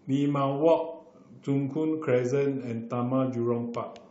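No audible technical faults are present in this short speech recording.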